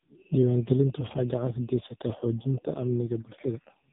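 Speech passed through the AMR narrowband mobile codec for its whole length, with nothing above 3.8 kHz. Damage is heavy: the voice sounds buzzy and synthetic, as the vocal-tract model is driven by very few pulses per frame, which fits one of the lowest AMR-NB modes, near 5 kbps.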